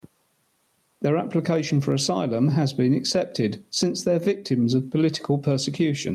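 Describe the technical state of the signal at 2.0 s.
At 2.0 s the speech is caught in gain pumping, present across the whole clip: the gain swings by around 10 dB, pulled down under each loud sound, likely from excessive input gain driving a fast limiter. The waveform looks flattened.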